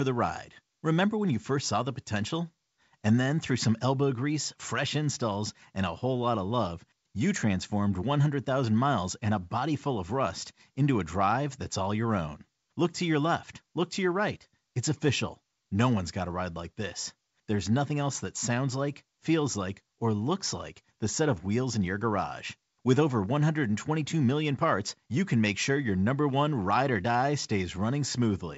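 No technical faults are audible.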